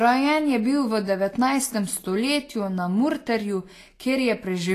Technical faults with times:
0.00-4.75 Vorbis compression

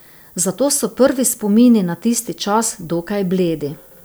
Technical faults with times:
0.00-4.04 low bit depth with noise shaping

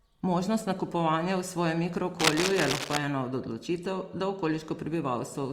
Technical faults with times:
2.19-2.97 cable scratch noise

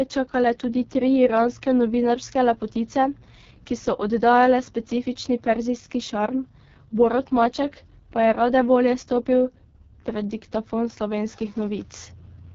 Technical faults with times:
0.00-12.55 AMR wideband (HD Voice) codec

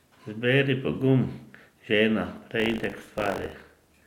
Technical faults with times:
2.58-4.06 buffer tearing

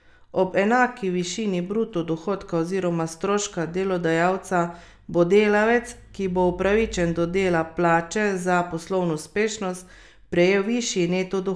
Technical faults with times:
none

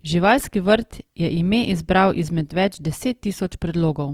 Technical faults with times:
0.00-4.13 Opus compression

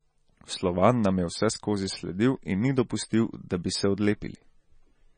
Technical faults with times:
0.00-5.18 MP3 compression

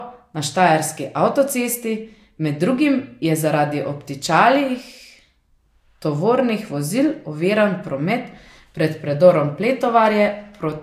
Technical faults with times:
0.00-10.83 low-bitrate audio saved at a high bitrate

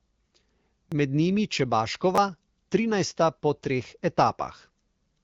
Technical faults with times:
0.90-0.92 repeated buffer
2.15-2.18 repeated buffer

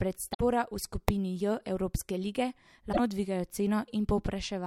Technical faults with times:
0.30-0.41 damaged data in a compressed stream
2.89-2.99 damaged data in a compressed stream

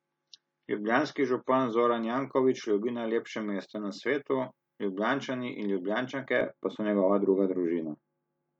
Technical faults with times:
0.00-2.00 adaptive stream starting at a low bitrate
6.41-8.59 de-emphasis applied wrongly

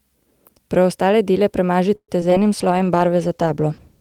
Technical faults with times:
1.95-2.10 call audio freeze
2.20-2.41 short concealed packet loss
2.54-4.00 call bitrate drop

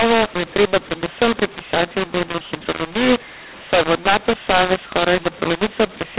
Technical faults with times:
0.00-6.19 mu-law and A-law mixed up

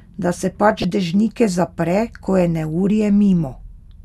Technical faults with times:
0.79-0.90 corrupt frame decoded

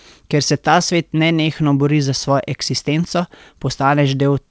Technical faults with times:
none

